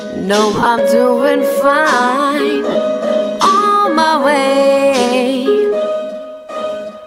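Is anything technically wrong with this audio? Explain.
Yes. Lost LE Audio frames cause dropouts at 0.54 to 0.66 s and at 2.71 to 2.75 s. The decoder fills each gap by repeating the last spectrum with random signs. The sound becomes a brief noisy smear that starts fading on longer gaps.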